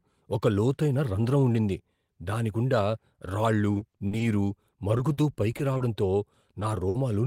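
Repeated packet loss (robotic sound) hits the speech at 3.73–4.57, 4.97–5.81 and 6.41–6.95 s. Holes up to 50 ms, about 15–20% of each stretch, are patched by repeating the preceding sound, giving choppy speech with pieces missing. Spectrograms show smeared, frozen blocks; waveforms show copied cycles.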